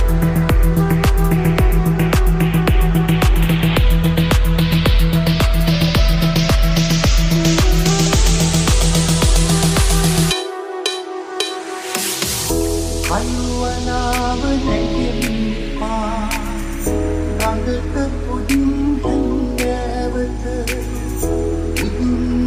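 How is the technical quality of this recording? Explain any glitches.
Nothing in the recording stood out as a technical problem on listening, so there are no glitches to explain.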